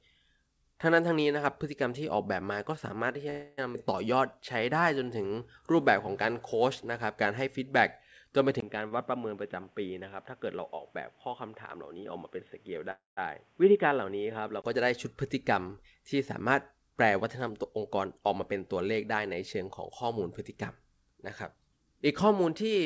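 A call audio freeze runs from 3.30 to 3.60 s. Incoming audio was likely held up in transit until the jitter buffer ran dry, so the receiver kept extending the last sound as a fading buzz or hiss for about 276 ms. The speech then resumes exactly where it stopped, with nothing lost. A second freeze, from 12.91 to 13.19 s, works the same way but fades into roughly 160 ms of silence before the speech resumes.

A skip ahead follows at 3.74 to 3.76 s. Around 150 ms of speech was dropped while later audio was already queued. Playback jumps straight across the missing stretch with only a tiny joining fill, so the two sides butt together abruptly.

Jitter buffer slow-down spans 4.15 to 5.85 s. To rebuild its reserve, the buffer repeated single pitch periods and bits of pauses many times over, adding 137 ms. The speech plays at 92% speed at unchanged pitch, sounding drawn out.

At 8.60 s the input switched to a poorer device, likely another microphone or a headset call profile. 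A 20 ms silence marks the switch, and from there until 14.64 s nothing above 3.8 kHz comes through. The sound turns boxy and dull, drops by around 5 dB, and gains new background noise about 35 dB below the speech.

Inside that stretch, a short stall from a late packet at 8.88 to 8.93 s holds one sound for 28 ms too long. The packet missed its slot, the buffer briefly emptied, and playback then continued from the same point, leaving a slight buzzy dip.

Jitter buffer speed-up covers 15.81 to 19.62 s. The buffer held more audio than its target, so it trimmed short pitch-period pieces over and over, removing around 300 ms. Speech runs at 106% speed at the same pitch and sounds slightly hurried.

Throughout the clip, the call path's coding leaves nothing above 8 kHz, which fits G.722 at 64 kbps.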